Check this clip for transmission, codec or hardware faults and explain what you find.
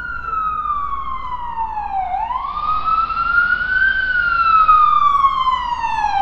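One fault is present: digital radio blending to analogue, from 2.33 to 5.06 s. The receiver lost the digital stream and cross-faded over about 340 ms to the AM broadcast, then back. The level shifts about 2 dB, and hiss sits around 25 dB below the sound.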